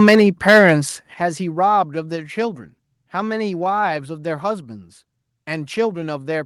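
Microphone overload runs from 0.0 to 0.71 s. The peaks push about 6 dB past the converter's ceiling, likely from excessive input volume, and their flattened tops give the loudest syllables a harsh, crackling edge. The microphone volume stepped down at 0.15 s by about 4 dB and again at 1.14 s by about 9 dB, likely the call software cutting input gain after detecting clipping, so voice and background drop abruptly together.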